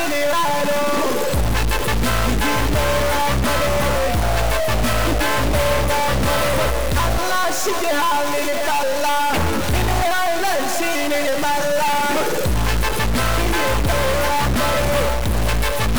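Right from the start and all the way through, there's a harsh, buzzy distortion riding on everything, and the quiet stretches don't go quiet. They fill with a gritty noise floor instead. That's the signature of a stuck bit, likely a data line or converter bit jammed at one value. Roughly half the samples get knocked off by a fixed step of around -20 dBFS, which is a fairly high bit, so the grit in the pauses is quite loud.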